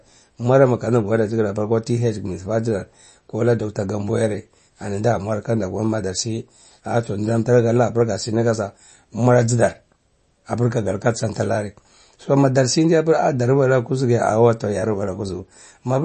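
Throughout, the speech stops dead at 8.3 kHz and its s sounds swirl and go watery, likely MP3 compression starved of bits, which fits roughly 32 kbps.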